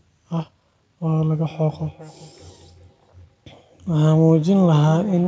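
From 1.5 s to the end, the speech carries feedback echo between two devices. A second device in the room replays this microphone's signal, which is picked up again, returning each phrase roughly every 400 ms, thinner and ringing, peaking about 19 dB below the speech. A spectrogram shows fainter, evenly spaced copies of each syllable trailing it.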